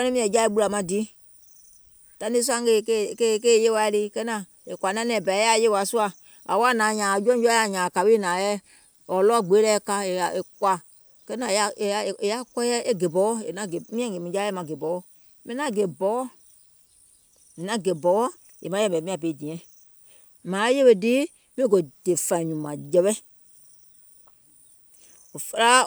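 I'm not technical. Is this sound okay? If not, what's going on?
Yes, this sound is okay, and nothing is going wrong with it.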